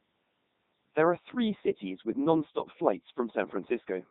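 From start to finish the speech carries the sound of the Codec 2 vocoder. Only pitch, voicing, energy and a coarse spectral envelope survive, and the decoder rebuilds each frame from sine waves, so the original waveform is gone. The result is a robotic, buzzy voice with heavy damage throughout. The stream runs at Codec 2's highest 3.2 kbit/s mode, though even there the natural texture of the voice is replaced by a synthetic hum.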